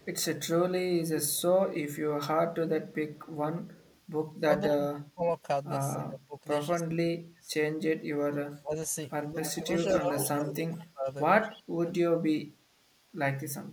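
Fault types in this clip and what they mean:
Echo leak: A faint delayed copy of the speech, trailing it by 203 ms, comes back at about 30 dB below the speech in short scraps at 0.0 and 1.32 s, then about 35 dB down from 3.15 to 4.0 s. Later it grows much stronger, at only about 5 dB below from 9.43 to 10.57 s and about 20 dB below from 11.53 to 11.94 s. The likely cause is a loudspeaker-side echo canceller letting part of its microphone pickup through.
Speech suppressed in double talk: Over 4.37 to 7.5 s and again over 8.57 to 12.27 s the talker's level dips in pieces, for roughly a second and a half in each stretch, falling by as much as about 30 dB in the first and about 25 dB in the second. This is likely an echo canceller that could not tell its own talker from the returning echo while both sides spoke, and turned both down together.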